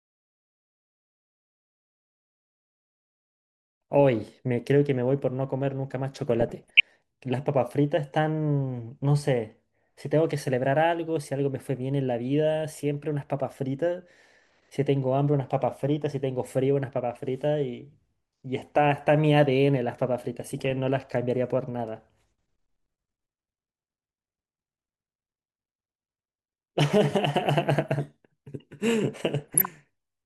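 Short blips of noise break through the speech at 6.41 to 6.94 s, 20.41 to 20.71 s and 29.39 to 29.81 s. This is DAB burbling: weak reception leaves bit errors of roughly 0.4 to 0.5 percent uncorrected, corrupting samples so single sub-bands carry short blips of noise.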